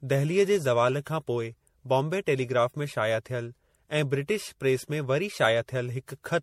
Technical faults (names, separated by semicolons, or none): generation loss